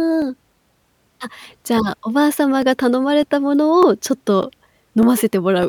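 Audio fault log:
0.22–5.63 s, clock drift buffer slips: about ten clicks, one every 0.6 s, likely two free-running clocks forcing a sample block to drop or repeat.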